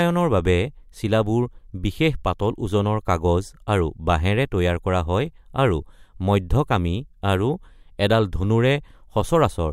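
No dropouts, clicks, distortion or other transmission faults are audible anywhere in this speech recording.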